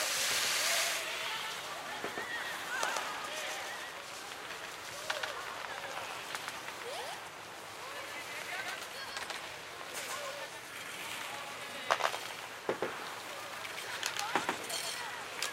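A doubled audio track runs from start to finish in this recording of sounds: every event is followed about 150 ms later by a second, full-band copy at roughly the same loudness. The repeat carries no decay or room colouring, so it reads as a hard slapback rather than an echo. The likely cause is the same signal reaching the mix twice, once directly and once through a slower path that lags by that fixed interval.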